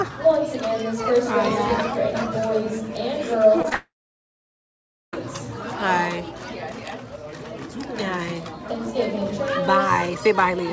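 The audio came through a call path with nothing above 8 kHz, which points to the G.722 codec at 64 kbps. Short concealed packet loss occurs at 3.62 to 3.65 s, 3.69 to 3.72 s and 3.73 s. About 20, 20 and 10 ms of audio are missing. The receiver patched each gap by extending the preceding sound, so each sounds like a brief smear or wobble. A long network dropout follows, likely the cause of the gap from 3.75 to 5.14 s. About 1.38 s never arrives. The last sound is stretched and fades, then roughly 1.23 s of silence remains. The audio resumes at 5.14 s without the lost stretch.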